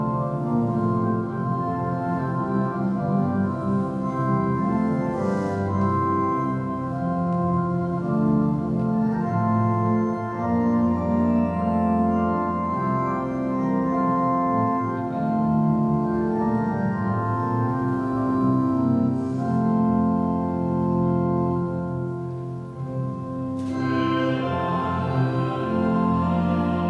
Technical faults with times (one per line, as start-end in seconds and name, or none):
none